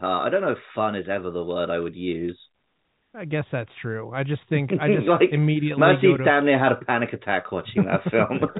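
Nothing goes wrong in this speech recording; it simply carries the usual G.711 telephone coding, which leaves it with nothing above about 3.8 kHz, just as a landline call would.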